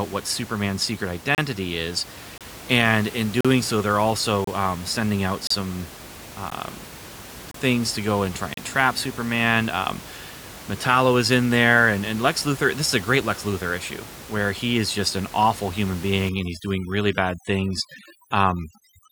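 From 1.35 to 8.57 seconds the speech is broken by eight short holes of digital silence with hard edges, at 1.35–1.38, 2.38–2.41, 3.41–3.45, 4.44–4.47, 5.47–5.51, 6.50, 7.51–7.54 and 8.54–8.57 s. These are gaps between stream segments. The stream arrives in 1.0-second segments whose time stamps leave a small space between them, and the player fills that space with silence. Each gap inserts roughly 13 to 40 ms of extra time. Unlike a packet-loss dropout, nothing is missing on either side of a hole: the speech pauses and then resumes exactly where it stopped. The steady one-second spacing is what marks this as a segment-boundary fault.

From 16.29 s to the end of the clip there is overdone noise removal. The room noise, which elsewhere sits about 17 dB below the speech, is driven down and breaks up into twinkling, warbling specks. Quieter parts of the voice are cut along with it because their frequency bands were judged close enough to the noise estimate. 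A simple noise gate would open and close as a whole. Here the damage happens band by band, so the background fizzes.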